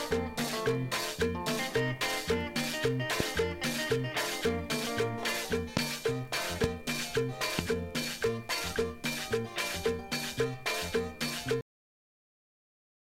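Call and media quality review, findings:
Loud pop, single pops at 3.20–3.23, 5.77–5.79, 6.64–6.66 and 7.59–7.61 s, about 20 dB above the signal (about 25 dB at 5.77 s); likely a voltage step from a switch, static or driver glitch. Audio continues underneath, unlike a dropout.

Cut-off end at 11.61 s: sound stops mid-event, then digital silence, with no decay or tail. The final buffers were never written, unlike a fade or natural ending.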